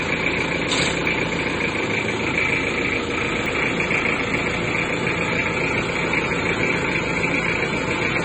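The whole clip carries smeared, watery artefacts stacked on top of each other, with the top end cut off. That points to transcoding between lossy codecs, likely a low-bitrate AAC encode that was then re-encoded as MP3, each pass adding its own damage.

At 1.06 s, 3.46 s and 4.38 s there's a small jump forward in the sound, with no gap. That's a dropped buffer (overrun), likely samples overwritten before being read. The first skips roughly 40 ms, and the other two about 20 ms each.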